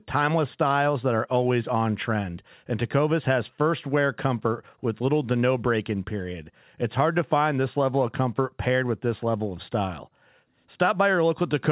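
No technical faults are audible.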